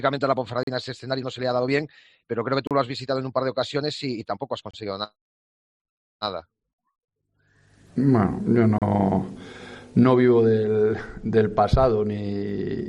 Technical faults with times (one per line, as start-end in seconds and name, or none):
0.63-0.67 gap between stream segments
2.67-2.71 gap between stream segments
4.71-4.74 gap between stream segments
6.74-6.78 gap between stream segments
8.78-8.82 gap between stream segments